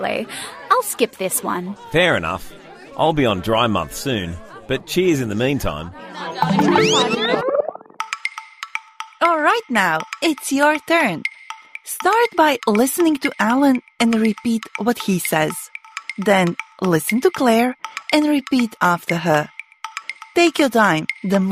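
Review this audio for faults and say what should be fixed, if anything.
No technical faults can be heard anywhere in this audio. Nothing needs to be fixed.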